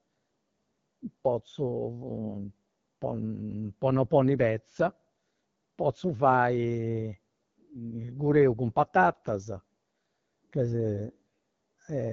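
AMR wideband (HD Voice) codec damage runs throughout. The speech is coded by a pulse-excited vocal tract model and nothing sounds above 7.4 kHz. Its plainly audible rough, raspy texture fits one of the lowest rates, around 8.85 kbit/s.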